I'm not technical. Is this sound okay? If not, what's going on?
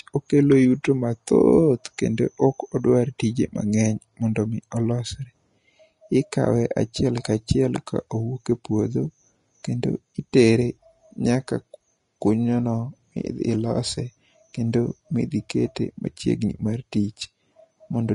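No. All the way through the clip the speech sounds hissy and grainy, and the top of the sound is missing, with nothing above about 10.6 kHz. This is likely Vorbis compression set to a low quality. To save space, the encoder cut off the highest frequencies and stored the remaining treble so roughly that the fine detail turned into a sandy hiss. The same roughness makes the voice's tone coarse and softens the starts of sounds.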